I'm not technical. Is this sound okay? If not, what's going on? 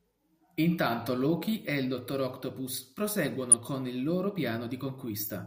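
No. There is a short burst of DAB burbling from 3.52 to 3.54 s, just before "con il loro". It sounds like a quick blip of noise. This happens when a digital radio signal is weak and a small share of the data arrives damaged despite the error correction. The damaged data puts short blips of noise into some frequency bands. The length of the burst points to two damaged blocks of audio.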